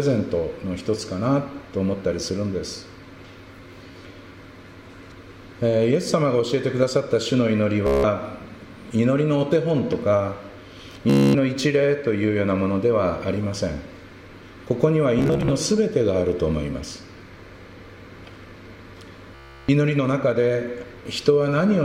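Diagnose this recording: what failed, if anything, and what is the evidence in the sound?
The failure is in the wireless link to the playback device. There are five episodes of Bluetooth stutter, at 3.92 to 3.95 s, 7.87 to 8.04 s, 11.10 to 11.35 s, 15.19 to 15.51 s and 19.35 to 19.69 s. In each, a short slice of audio repeats until fresh data arrives. The receiver ran out of fresh packets and replayed its last buffer. Up to about 330 ms goes missing, and the sound resumes further on. The 15.19 s episode is broken into scattered short gaps.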